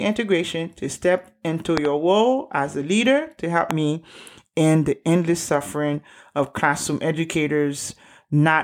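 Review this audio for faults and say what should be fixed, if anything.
A voltage step, likely from a plug, switch or static discharge, reached the signal path twice, adding loud pops over the continuing speech. A double pop hits at 1.77–1.87 s before "role as a leader", and a single pop at 3.71–3.73 s between "a leader to help" and "me end the endless." Both are far louder than the speech. Seat connectors firmly, avoid switching during recording, and ground equipment to prevent it.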